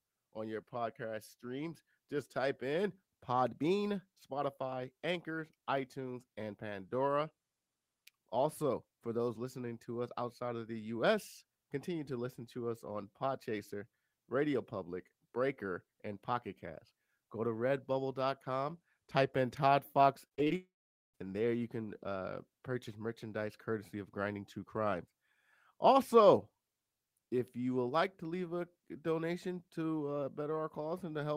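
From 20.27 to 20.52 s the speech breaks up with repeated packet loss, giving a choppy, robotic quality. Five short gaps fall within that quarter-second, the longest about 32 ms, and each is bridged by extending the preceding sound rather than by real audio. Roughly 42% of the stretch is this synthetic fill, so the speech turns clipped, with small pieces missing between the patched fragments.

Immediately after, from 20.56 to 21.16 s, the audio stops for about 0.6 s, which is likely a long network dropout. The last sound is held over briefly as a fading buzz, then gives way to roughly 460 ms of silence before speech resumes. Nothing from that interval is recovered; the speech picks up at a later point, and the content that fell in the gap is simply absent.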